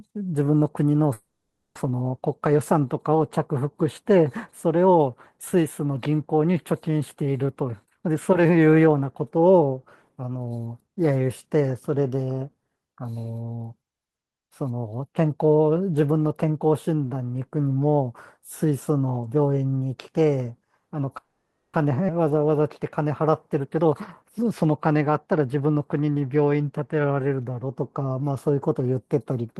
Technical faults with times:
1.13-1.77 call audio freeze
7.55-10.31 jitter buffer speed-up
21.18-21.76 call audio freeze
22.08-22.11 skip ahead
23.54-26.17 jitter buffer speed-up

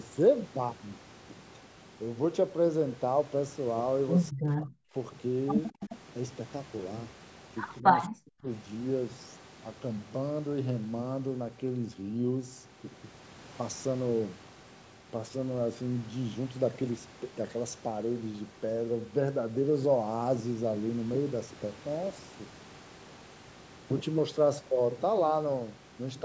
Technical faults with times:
4.30-4.94 speech suppressed in double talk
5.80-5.97 echo leak
7.80-8.47 speech suppressed in double talk

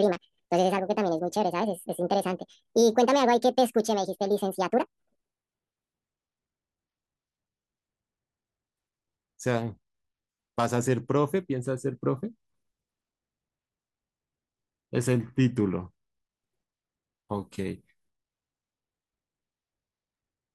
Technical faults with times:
0.00-6.01 section at the wrong speed

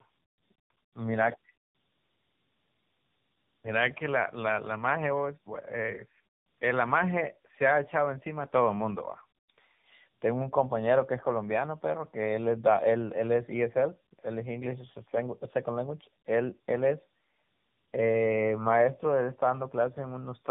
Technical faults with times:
0.00-20.51 tandem speech coding

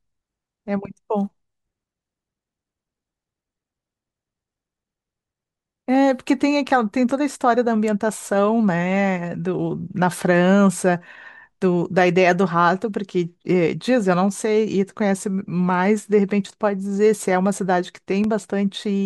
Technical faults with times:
7.11-7.14 loud pop
18.24-18.27 loud pop

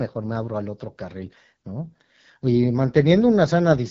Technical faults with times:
0.00-3.91 AMR wideband (HD Voice) codec

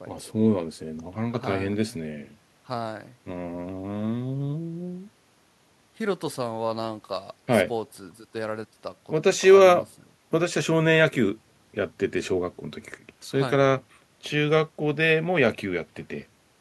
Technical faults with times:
none

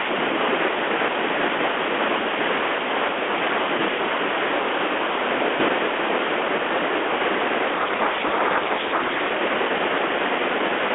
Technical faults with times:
7.74-9.28 codec payload misread

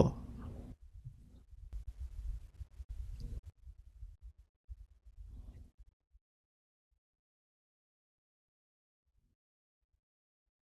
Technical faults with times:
1.73-3.50 sudden gain jump
6.02-10.77 sudden gain jump

